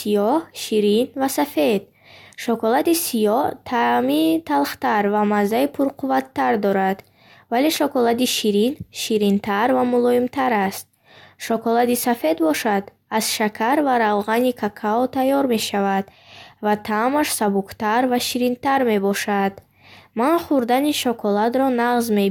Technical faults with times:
none

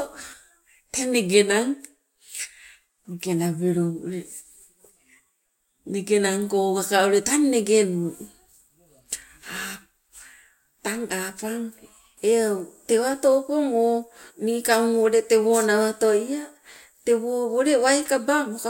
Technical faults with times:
none

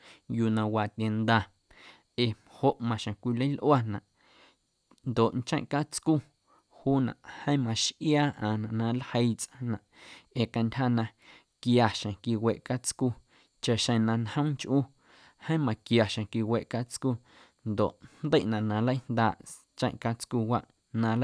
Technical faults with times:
none

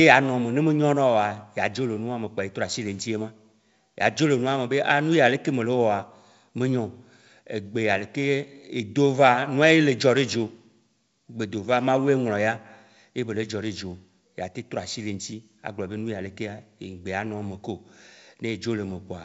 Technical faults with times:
none

